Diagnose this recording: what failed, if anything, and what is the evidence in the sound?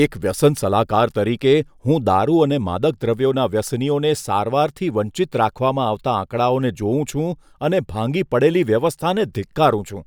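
Nothing failed here: listening through the recording, I can't hear anything in the signal chain that went wrong at any stage.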